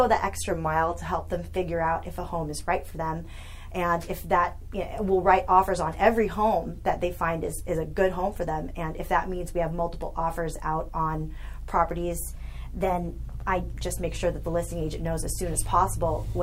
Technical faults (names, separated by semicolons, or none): drift correction step